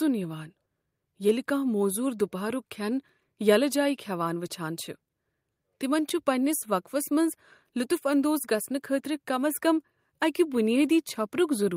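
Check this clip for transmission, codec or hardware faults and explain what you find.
Nothing stood out on listening to this speech recording.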